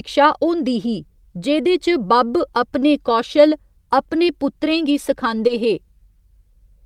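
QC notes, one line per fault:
5.47–5.51 s, short concealed packet loss: about 20 ms of the speech never arrived in time, and the receiver bridged the gap by extending the preceding sound for roughly 20 ms before crossfading back, heard as a brief smear or wobble. On a spectrogram, harmonics run flat and repeated across the gap, or as shaped noise if unvoiced. On the waveform, a too-regular repeated cycle pattern sits before a smooth blend.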